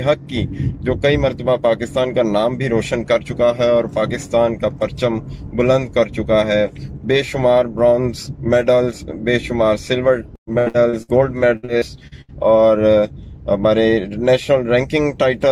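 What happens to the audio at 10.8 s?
Right around there the audio is in the middle of a burst of repeated packet loss (robotic sound), running from about 10.35 to 11.10 s. Six gaps arrive in quick succession, the longest about 116 ms, and each one gets patched by stretching the last bit of sound. Close to half that stretch is filler, so it comes out choppy, with pieces missing.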